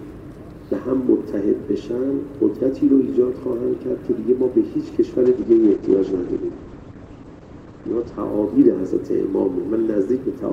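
From 5.27 s to 8.25 s the audio suffers a call bitrate drop: the upper band vanishes and the sound turns coarse and watery for almost 3 s before clarity returns. The encoder was squeezed from full quality to a rate that fits roughly 9 kbps, so it codes far more crudely and caps the bandwidth at about 8 kHz instead of 20 kHz. On a spectrogram this appears as a sharp ceiling at 8 kHz across that span, with smeared, blocky detail below it.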